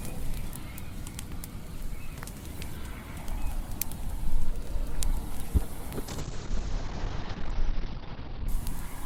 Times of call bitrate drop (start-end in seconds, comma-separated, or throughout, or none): 6.08-8.54